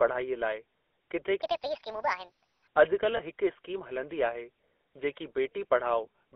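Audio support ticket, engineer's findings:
GSM full-rate codec, whole clip: buzzy, gravelly roughness on all speech, plainly audible. Band limited to roughly 300 Hz to 3.5 kHz, nothing above. Consistent with 13 kbps GSM full rate: vocal-tract filter excited by a sparse regular pulse train, with the fine excitation detail discarded, producing the rasp. Probable component: GSM leg of the call path.

Section at the wrong speed, 1.42 s to 2.67 s, immediately after "लाइ किथे": speech turns high and hurried, playing about 1.58 times fast and raised about seven semitones. Pitch and tempo shift together, so this is resampling rather than pitch processing. Likely cause: playback or edit stage running that segment against a mismatched clock.

Lost GSM frames, 3.17 s to 3.21 s, just before "हिक स्कीम हलंदी आहे": brief rough, metallic ring where speech should continue. Decoder concealment repeats the last good frame's parameters in place of the missing data. 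Duration fits a single 20 ms frame dropped on the radio or transport side.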